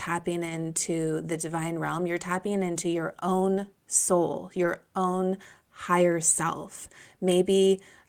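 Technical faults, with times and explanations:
0.45–0.51 s and 4.63–4.65 s, lost packet rebuilt from error correction: the first stretch (about 40 ms, consistent with two 20 ms packets) and the second (about 20 ms, between "into your own soul" and "own higher self") play without gaps. Each was rebuilt from the low-bitrate copy carried in the following packet, so the speech there sounds briefly rougher and noisier.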